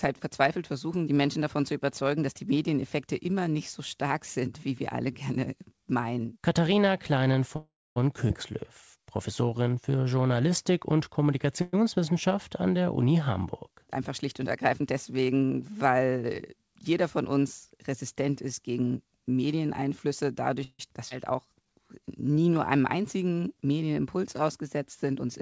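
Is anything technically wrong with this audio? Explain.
Yes, the speech has several playback faults typical of a call connection with an unsteady network. The band also stops at 8 kHz, which fits the G.722 codec.

Call audio freezes occur at 7.56–7.98 s, 11.61–11.75 s and 20.64–20.81 s. The likely cause is packets held up so the jitter buffer ran empty. The last sound is stretched into a fading buzz, and the first freeze ends in about 0.27 s of silence. Speech then resumes intact.

Skip aheads occur at 8.28–8.31 s and 21.09–21.12 s. Audio was dropped while later packets waited, so playback jumps forward almost seamlessly. Roughly a tenth of a second is lost at the first, and about a third of a second at the second.

Jitter buffer slow-downs occur at 8.52–9.92 s (93% speed, 102 ms added) and 21.33–23.62 s (92% speed, 194 ms added). Repeated pitch periods rebuild the buffer's reserve, so speech drags at unchanged pitch.

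A jitter buffer speed-up occurs at 13.97–15.74 s. Short pitch-period pieces are cut to trim excess delay, about a tenth of a second in total. The speech runs at 105% and sounds slightly hurried.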